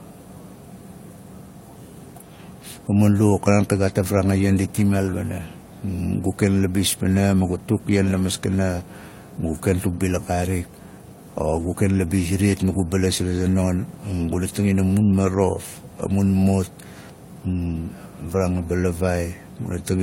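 Speech, with faults running the whole way through. The sound shows transcoding between lossy codecs. Nothing is present above 16.3 kHz. Two layers of artefacts are heard together. There is the smeared, swirly top end of a low-rate stage, with a fresh layer of coding noise on top. The likely cause is an HE-AAC encode near 32 kbit/s, re-encoded as AAC-LC near 64 kbit/s. The second pass spends bits copying the first pass's damage.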